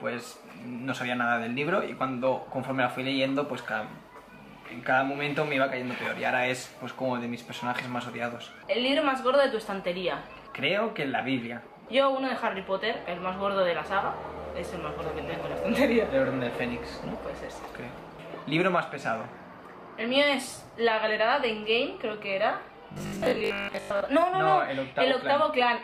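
From about 22.92 s to 24.06 s the sound goes robotic, a rigid metallic buzz locked at 50 Hz. The likely cause is repeated short buffers: audio arriving too late, with the last 20 ms or so looped to fill the gap, so most of that stretch is repeats.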